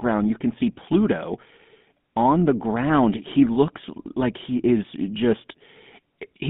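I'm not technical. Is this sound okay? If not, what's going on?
No. From start to finish the speech has been through the GSM full-rate codec, the compression used by early mobile phones, and the damage is plainly audible. It rebuilds the voice from a simplified model driven by evenly spaced pulses, which gives a buzzy, gravelly roughness. The sound is also squeezed into a phone-line band of roughly 150 Hz to 3.6 kHz, so the deep body and the crisp upper detail are both missing.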